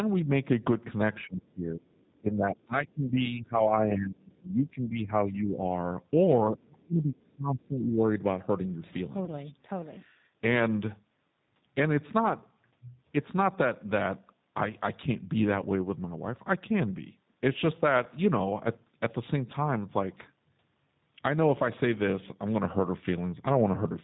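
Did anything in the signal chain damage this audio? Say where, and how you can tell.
Yes. The G.729 codec damaged the whole clip. It sounds plainly rough and synthetic. At 8 kbit/s, this codec passes nothing above 4 kHz.

From 1.99 to 2.21 s, a faint second voice sits about 40 dB below the speech. This is likely the other side's voice leaking through the echo canceller.

From 6.47 to 8.08 s, the speech dips by up to about 30 dB for roughly 1.5 s. This is likely speech suppressed in double talk by call processing.

At 9.25 s, a 30 ms gap is stretched over and fades. This is VoIP packet loss concealed by the speech codec, which fits one lost packet.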